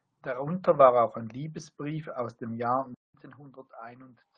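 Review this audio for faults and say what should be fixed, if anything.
At 2.94 s the audio drops out for about 200 ms, then comes back duller and quieter through to the end. Everything above 5 kHz is gone and the level sits about 10 dB lower, with a new faint noise floor well under the speech. That's likely an input switched to a poorer device, maybe a headset's call profile, narrowing the band well below the roughly 12 kHz the call codec was carrying before. Pin the input device so it can't change mid-recording.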